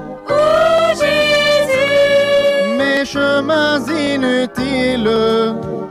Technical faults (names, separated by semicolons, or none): clock drift buffer slips